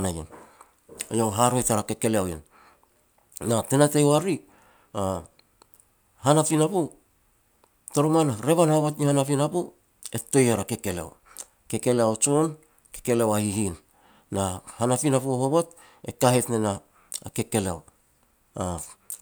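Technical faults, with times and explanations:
No technical faults can be heard anywhere in the recording. Nothing in the audio calls for a time or an explanation.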